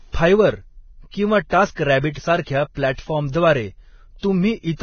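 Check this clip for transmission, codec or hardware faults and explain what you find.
Two faults are present: one runs through the whole clip and one is brief, near the end.

Throughout, the speech is heavy with codec damage: hissy, grainy treble with nothing above 6.5 kHz. This is likely Vorbis compression at a very low bitrate, around 18 kbps, coarsely quantising the residue above a smoothed floor.

From 4.18 to 4.23 s there is pre-echo: a 47 ms hiss precedes a sharp onset, because quantisation noise sized for the loud attack spreads across its whole transform block.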